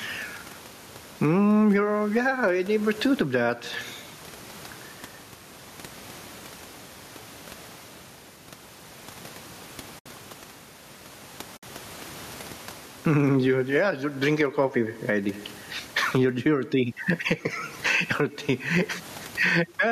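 Right from the start there's gain pumping, with a level swing of roughly 15 dB. It sounds squashed and breathing, most likely from input gain set too high with a fast limiter clamping down.

Then there's AAC frame loss with muting at 9.99 to 10.06 s and again at 11.57 to 11.63 s, holes of 70 and 60 ms, which fits about seven and six lost 10 ms frames. The decoder zeroed those frames, so the sound fades out and back in softly, and the quiet room noise drops away with it.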